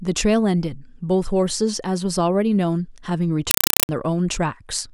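A speech recording in which, from 3.51 to 3.89 s, the audio is replaced by very loud, chattering static: a compressed stream played as audio. Instead of being decoded, an AC-3 (Dolby Digital) bitstream was passed to the output as if it were ordinary samples. Each encoded frame comes out as a 4 ms burst of noise followed by silent padding, repeating at 31.25 Hz, which gives the chatter its rhythm and fits a 192 kbps AC-3 stream.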